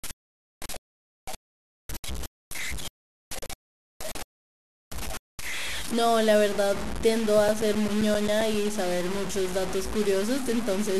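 From start to finish the samples appear to have been cut to very few levels without dither, likely plain truncation to something like 4 bits. This is low bit depth without dither: the rounding error tracks the speech, so it turns coarse and grainy, with distortion only about 10 dB below the signal, and quiet stretches crumble into grit.

From 7.35 to 8.67 s, data lost to a disc blemish on each rotation defeats error correction, producing CD scratch ticks. Eleven short clicks or micro-dropouts, the longest a few milliseconds, repeat at roughly eight per second, of uneven strength.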